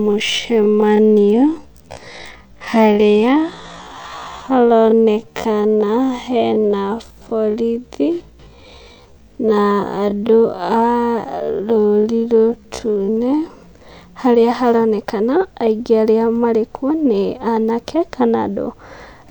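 From 0.0 to 13.5 s the speech runs at half speed while its pitch holds steady. This is a time-stretched section. The slow, dragging pace likely comes from software repeating short slices to lengthen the audio. Normal pace returns abruptly at 13.5 s.

Between 0.45 and 3.86 s a Bluetooth SBC bit pool drop overlaps that stretch. The treble turns dull and a gritty noise rises. The top sub-bands are starved of bits and the rest are coarsely quantised. This fits a bit pool falling from 28 to 13, near 102 kbps.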